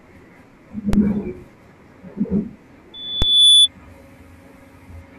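A speech recording with two DC steps and a loudspeaker feedback squeal. At 0.93 s and again at 3.22 s, the waveform's zero line suddenly jumps by about -5 dBFS. Each jump gives a low thump. The offset then dies away, as a 20 Hz high-pass would drain it. The speech itself carries on unchanged. From 2.94 s to 3.68 s, a 3.5 kHz tone swells up over about half a second. It peaks roughly 15 dB above the speech. This is loudspeaker feedback: a microphone hears its own loudspeaker, and the loop gain tops one at that pitch.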